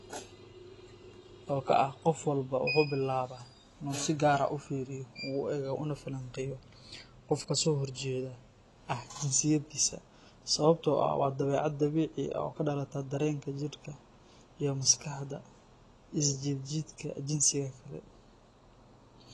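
From start to end the speech sounds dull and smeared, with a warbling, fizzy edge on sibilants and nothing above 11.5 kHz. The likely cause is AAC compression, plainly audible here, which fits AAC-LC at around 32 kbps.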